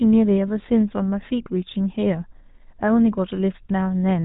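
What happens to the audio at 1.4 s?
At 1.4 s, as everywhere in the clip, you're hearing the GSM full-rate codec. It rebuilds the speech from a vocal-tract model fed by sparse regular pulses, giving that buzzy, gravelly edge, and nothing gets through above 3.8 kHz in this 13 kbps stream.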